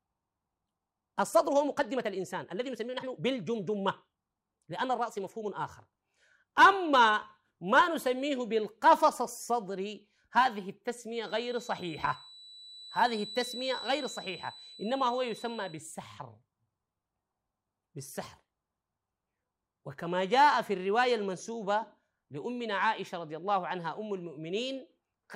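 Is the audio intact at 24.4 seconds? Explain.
Yes, the speech is intact at 24.4 seconds, with no fault audible at that moment.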